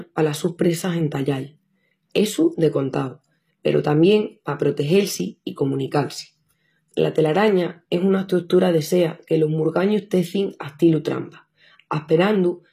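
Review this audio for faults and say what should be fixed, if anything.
The speech carries HE-AAC compression damage throughout, plainly audible, with s sounds turning gritty and metallic. The likely cause is spectral band replication, where treble is rebuilt by copying lower bands upward, consistent with a low bitrate near 24 kbps. On a spectrogram, the upper bands look like smeared copies of lower ones, and there is a hard ceiling with nothing above 14.9 kHz. To prevent it, encode at a higher bitrate or with plain AAC instead of HE-AAC.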